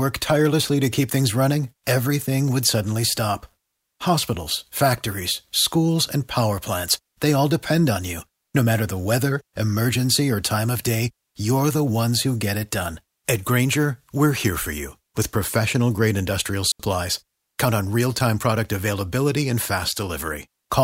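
Speech, with one digital wireless dropout at 16.72 s. The link lost too much data, so the receiver muted for about 79 ms. It leaves a clean, near-silent hole, with no noise burst around it.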